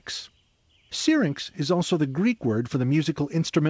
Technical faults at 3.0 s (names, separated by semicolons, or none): none